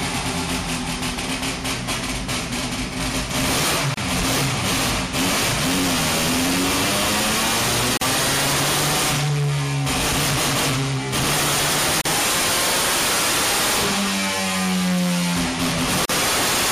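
At 3.94 s, 7.97 s, 12.01 s and 16.05 s, roughly every 4 s, the sound drops out for 31 ms, then 40 ms at the last three: gaps at joins of separately encoded pieces, where untrimmed encoder delay and end padding leave silence with smeared edges before continuing.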